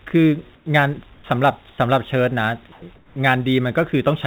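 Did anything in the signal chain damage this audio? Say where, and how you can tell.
Yes. At the converter, sample clock jitter of a few microseconds runs through the whole clip. Samples land slightly early or late, and the error scales with waveform slope, so a faint roughness rides on louder, brighter speech, roughly 35 dB below the signal, and disappears in pauses.

In call processing, comfort noise in place of the background shows up at 0.56–0.66, 1.14–1.24, 1.70–1.78 and 2.96–3.16 s. The natural room noise in these gaps turns into a flat, featureless hiss, about 7 dB quieter at the first gap and about 1 to 2 dB quieter at the others. This is likely discontinuous transmission substituting synthetic noise.

At 2.72–2.82 s, sound dropped by the voice detector cuts about 70 ms of speech, replaced by steady noise until speech resumes. The likely cause is the sender's detector mistaking quiet speech for background and halting transmission. 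The G.711 path above this, band-limited at 4 kHz, is expected behaviour.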